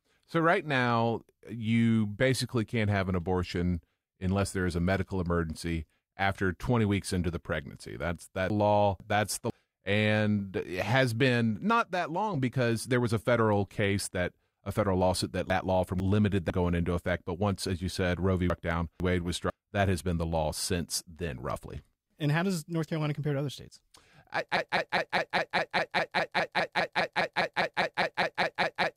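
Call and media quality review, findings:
Chunks out of order, 8.5–9.5 s, 15.5–16.5 s, 18.5–19.5 s: one 500 ms chunk plays a chunk late, heard as a jumbled moment. Nothing is lost or repeated.

Broken-record loop, 24.57 s to end: a 0.2 s fragment repeats exactly 22 times and the following speech is lost. Likely a stalled player or stream resending its last buffer.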